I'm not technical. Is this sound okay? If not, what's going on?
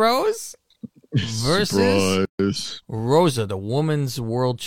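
No, there's a gap at a join of encoded pieces: the speech drops out for about 140 ms at 2.25 s, where two separately encoded pieces were joined with their padding silence left in.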